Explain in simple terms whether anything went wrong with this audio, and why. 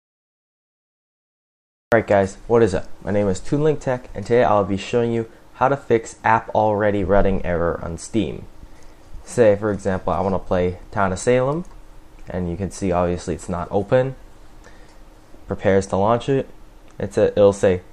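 Something did go wrong at the very beginning. The clip opens with nearly two seconds of dead silence. Then, at 1.92 seconds, the sound jumps in mid-flow with no natural start. This is a cut-off start: the recording began too late.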